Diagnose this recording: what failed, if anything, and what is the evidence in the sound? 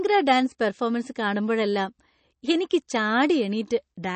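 MP3 compression damage runs throughout the speech, most likely from the codec stage. Nothing survives above about 8.3 kHz, a hard treble cut that fits an encoder starved of bits, around 32 kbps. The damage is plainly audible: weak frequency lines drop in and out from frame to frame, giving a watery, swirling texture, with chirpy metallic edges on the s sounds and smeared attacks where consonants begin.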